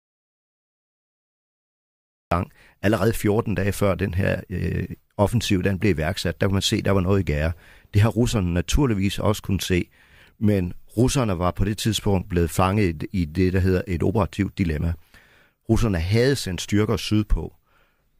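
The clip opens in an audio dropout to silence lasting until 2.31 s. The input was likely lost. Only silence remains, with no room tone, before speech begins.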